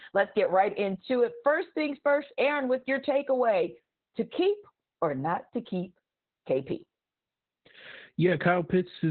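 Throughout the speech, the audio has been squeezed through Opus voice compression running in its SILK linear-prediction mode at a very low rate, consistent with roughly 8 kbps in 20 ms frames. At that budget the coder keeps only a narrowband signal, cutting everything above about 4 kHz, and quantises the excitation coarsely. The damage is heavy: the speech sounds muffled and telephone-thin, with a hoarse, buzzy roughness and a faintly robotic edge on every phrase.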